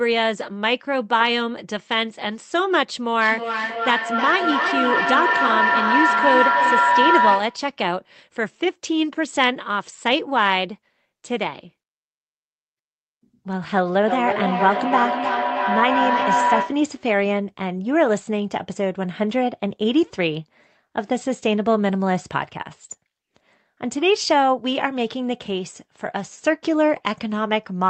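Speech carried over a call where two devices share a room, so the microphone-to-loudspeaker loop gains level on each pass and builds into a feedback howl near 1 kHz from 3.2 to 7.72 s and 14.08 to 16.96 s, pulsing roughly three times a second and peaking about 2 dB above the speech, then about level with it.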